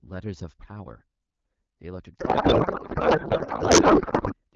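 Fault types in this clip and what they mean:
Codec payload misread: from 2.19 s to 4.34 s the receiver unpacks the AMR wideband frames with the wrong bit layout, which fits octet-aligned packing read as bandwidth-efficient, so speech becomes garbled noise and warble; spectrogram harmonics dissolve into smeared broadband texture.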